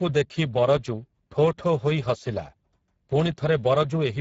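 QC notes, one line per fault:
throughout – Speex codec: the speech sounds hoarse and grainy, with plainly audible damage, which points to a low bitrate of around 10 kbps. Nothing sits above 7.7 kHz, and the top band is only a noise-like fill. This CELP roughness differs from MP3's swirly, watery smearing.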